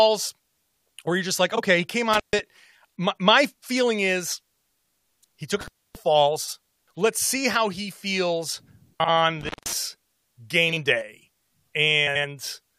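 At 1.55 s a brief garbled flutter marks frames out of order: two neighbouring runs of about 21 ms each were swapped and decoded that way, so no time is lost. At 2.13 s the sound cuts out for about 136 ms with crackle at both edges and faint hiss beneath. This is an intermittent contact, a loose connection momentarily opening the line, and it recurs at 5.61 s for about 272 ms. The swapped-frame flutter returns at 6.43, 9.00 and 10.68 s with runs of about 43 ms each. Another contact dropout of about 169 ms comes at 9.41 s, and a final, longer swap with runs of about 85 ms falls at 12.07 s.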